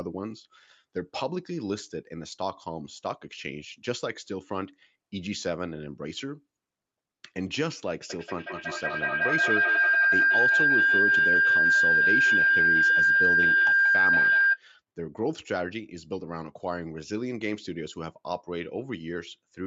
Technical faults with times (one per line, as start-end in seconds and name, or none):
8.10-14.63 feedback howl